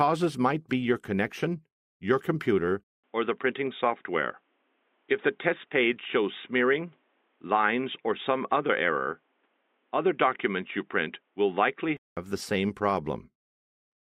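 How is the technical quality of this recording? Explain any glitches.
Technical quality is compromised by one fault. From 2.84 s to 12.17 s, the input likely switched to a poorer device. Its narrower band removes everything above 3.8 kHz, so the sound turns dull and boxy after a 200 ms silence. Faint new background noise appears, around 45 dB down, while the level stays about the same.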